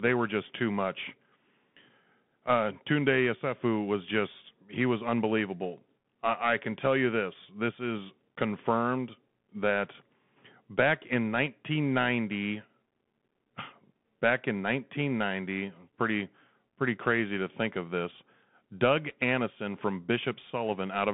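Throughout, the speech sounds boxed-in and scratchy, confined to about 150 Hz to 3.5 kHz, with gritty hiss and rough s sounds: Bluetooth CVSD headset codec, its one-bit steps, fitting 64 kbps, failing to track fast changes.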